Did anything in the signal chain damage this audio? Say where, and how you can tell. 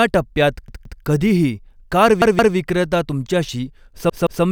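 Yes. At the driver/buffer stage, new audio missed its deadline and the device played a repeated buffer: a roughly 171 ms block (fitting an 8192-sample buffer) sounded three times with hard joins at 0.68–1.02 s (before "कधीही कार"), 2.22–2.56 s (after "टप्प्यात कधीही कार") and 4.10–4.44 s, heard as stutters.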